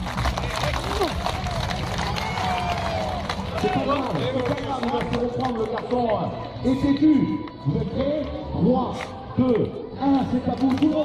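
No technical fault can be heard anywhere in the audio; the signal stays steady and intact throughout.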